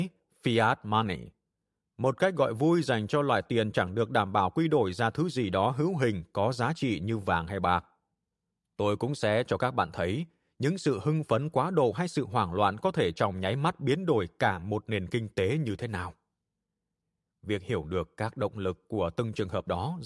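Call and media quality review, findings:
No audible faults found on the speech path; levels, continuity and bandwidth sound consistent throughout.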